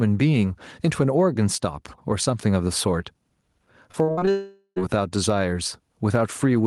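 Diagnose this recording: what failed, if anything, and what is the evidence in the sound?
Gain pumping runs through the whole recording, a call-processing or capture-stage fault: the level is pulled down on every loud sound and let back up between them, a swing of around 10 dB. The likely cause is input gain set far too high, with a fast limiter clamping each peak. A breathing rise between phrases is what separates it from plain clipping.

Repeated packet loss (robotic sound) appears from 3.91 to 4.29 s, a network fault. Five short holes, the longest 57 ms, are patched by stretching the preceding sound, so about 41% of that span is concealment and the speech turns choppy. Unlike one long dropout, the holes come in quick succession with real audio between them.

A long network dropout follows from 4.31 to 4.78 s. The receiver continues the last sound as a fading buzz or hiss for roughly 0.45 s, ending in about 80 ms of silence, and the speech resumes with that stretch missing. 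The likely cause is a burst of lost or late packets. The single long, fading fill distinguishes it from the brief repeated patches just before.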